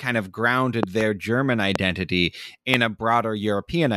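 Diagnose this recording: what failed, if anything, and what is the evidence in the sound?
Loud pops mark a likely analogue wiring fault, such as a loose plug or static discharge. A double pop sits at 0.83–1.03 s, with single pops at 1.76–1.78 s and 2.74–2.76 s. Each peaks about 20 dB above the speech. The speech continues underneath.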